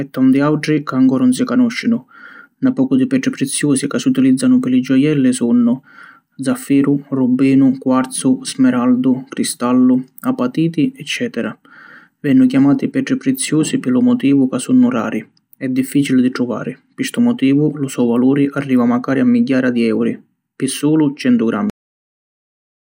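At 21.70 s the recording suffers a cut-off end: the final buffers were never written or played out, so the speech stops mid-sound and drops straight into digital silence with no natural decay, holding that dead silence for the remaining 1.27 s.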